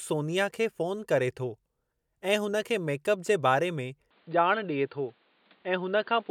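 At 4.11 s the speech turns abruptly dull and boxy through to the end, with nothing above 4.7 kHz, a faint new noise floor about 35 dB below the speech, no gap, and little level change. This is likely the input switched to a poorer, narrower-band device.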